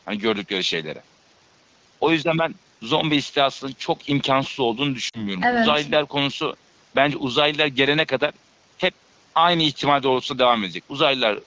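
Lost AMR speech frames in this speech recording, at 5.09 to 5.25 s: about 40 ms of coded speech failed its checks, which fits two 20 ms frames. The wideband decoder filled the gap by repeating its last good settings at falling gain, so the sound smears briefly, sags, then returns thin and slightly rough.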